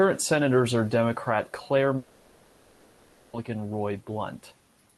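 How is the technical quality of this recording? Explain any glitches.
The recording has one serious glitch: a long network dropout from about 1.97 s to 3.35 s. For roughly 1.4 s, the incoming stream most likely stopped delivering packets, and the receiver filled the entire gap with concealment rather than falling silent. What you hear is the last speech sound stretched into a smeared buzz or hiss that fades but never drops to clean silence. The speech then resumes with that 1.4 s of content gone. The call codec's band limit, near 12 kHz, cuts off the highest frequencies throughout.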